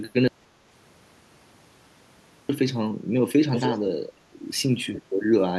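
At 0.28 s the speech cuts out into an audio dropout to silence that lasts until 2.49 s, a little over two seconds of dead silence with no room tone at all. The input was likely lost for that stretch, so whatever was said then is simply gone. Later, from 3.52 to 3.88 s, there's an echo leak: a copy of the speech trailing about 300 ms behind, only a bit quieter than the original. That's likely a far-end loudspeaker being picked up and not fully cancelled.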